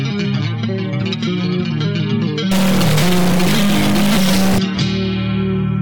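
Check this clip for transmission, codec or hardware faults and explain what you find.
One hardware fault is present. Stuck bit, 2.51 to 4.58 s: one data bit, likely held by a broken line or converter, offsets values by about -15 dBFS, producing harsh, buzzy distortion.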